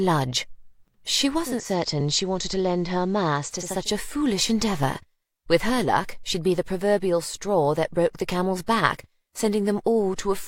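From 1.36 to 3.90 s there's digital radio blending to analogue, crossfading over 415 ms to FM: level drops about 1 dB, faint hiss appears.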